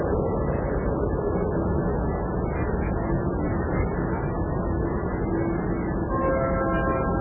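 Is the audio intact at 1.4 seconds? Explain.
No. At 1.4 s, as throughout the clip, the sound shows heavy damage that is likely from MP3 compression at a very low rate, fitting roughly 8 kbps. Nothing survives above 2.9 kHz, and weak frequency lines drop in and out between frames, leaving a dull, watery, smeared sound.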